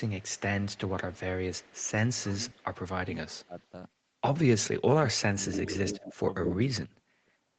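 The clip is speech carried over a call path whose band stops at 8 kHz, and it has two faults. An echo leak appears from 0.0 to 1.89 s, 2.5 to 2.75 s, 3.35 to 3.66 s and 5.53 to 6.55 s. A second copy of the far side's speech returns 214 ms late. Most of the time it sits about 35 to 40 dB below the main speech, but between 5.53 and 6.55 s it rises to about 5 dB below. Because it is a distinct delayed repeat and not a smeared tail, it is echo and not room reverberation. It likely comes from the loudspeaker end's echo canceller letting residual pickup through.

Speech suppressed in double talk shows up from 2.16 to 3.55 s and from 4.89 to 6.92 s. While the far side is also sounding, the speech is pulled down in level. The drops total roughly half a second, reaching about 20 dB, in the first span, and roughly a second, reaching about 35 dB, in the second. The level ducks only while both sides overlap, which separates this from packet loss. 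The likely cause is the canceller mistaking the local talker for echo.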